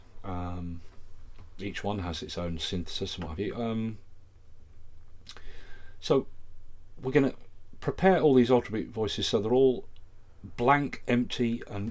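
No technical faults occur at any point in this audio.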